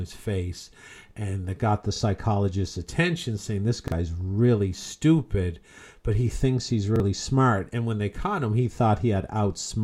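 At 1.96 to 2.00 s, 3.88 to 3.92 s and 6.96 to 7.00 s the speech stutters briefly with a repeated buffer. Fresh audio missed its deadline, so the last 40 ms block, consistent with a 40 ms buffer, played once more, and about 40 ms of real speech went missing each time. On the waveform an identical segment sits twice in a row with a sharp discontinuity at the seam, and the spectrogram shows a duplicated slice bounded by thin vertical broadband lines.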